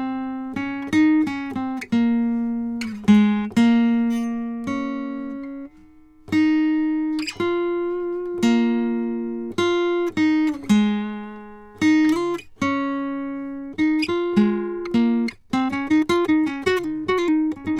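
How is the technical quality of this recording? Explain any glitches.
The recording has one clear glitch, a time-stretched section at the end. From 13.58 s to 17.79 s the music abruptly runs 1.88 times faster at the same pitch, likely from software dropping short slices to shorten it. It sounds rushed. A spectrogram keeps harmonics at the same heights but packs events tighter.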